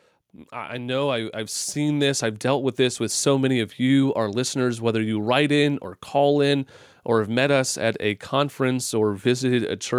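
From 0.49 s to 3.29 s the voice and the room behind it swell together by about 10 dB, settling just before "many of you our". This is automatic gain rising: the gain control judged the input too quiet and slowly turned itself up.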